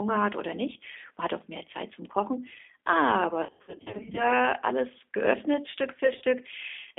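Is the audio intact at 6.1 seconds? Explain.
No. From 6.05 to 6.23 s the call suffers VoIP packet loss concealed by the speech codec. About 80 ms of audio is missing, scattered over 160 ms with the longest gap 40 ms. The decoder stretches its last pitch and filter into a fading buzzy tone or coloured noise, and recovery lags afterwards. That gradual smearing distinguishes it from the hard clicks or silences of plain dropouts.

Underneath, throughout the clip, the G.729 codec at 8 kbit/s limits the line to 250 Hz–3.6 kHz. Its pulse-based excitation makes the speech plainly rough and synthetic. Unlike a simple band-limit filter, it also adds this grainy texture.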